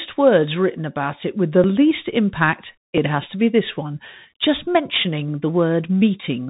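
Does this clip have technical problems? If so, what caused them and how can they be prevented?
Yes. Throughout the speech, from start to finish, the Bluetooth CVSD headset codec is plainly audible. Nothing above 3.8 kHz survives. The codec encodes each sample as a single up-or-down bit and adapts its step size, which fits a 64 kbit/s link, so fast, loud high-frequency movements outrun the step, leaving scratchy sibilants and a granular hiss. A spectrogram shows a hard ceiling near 3.8 kHz with a speckled noise floor beneath. To prevent it, record through a wired or wideband-capable microphone instead of the headset's hands-free profile.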